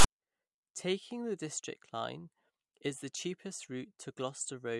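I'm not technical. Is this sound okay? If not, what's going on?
No. The player read the file's tags, the text labels stored with the recording, as if they were sound. This is called file tags played as audio. From 0.00 to 0.05 s it makes a short, harsh rasp that starts and stops abruptly.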